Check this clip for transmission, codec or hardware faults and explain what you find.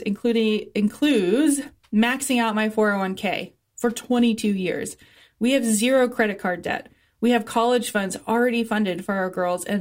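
Nothing in this speech recording suggests a transmission, codec or hardware problem, so there's nothing to report.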